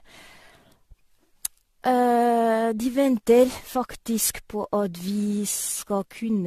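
Throughout the speech, generation loss gives a swirly, hollow, smeared quality with blurred consonant attacks, likely from around seven successive passes through an AAC-LC encoder near 64 kbit/s. A spectrogram shows nothing above 14 kHz, flickering holes between harmonics, and smeared onsets.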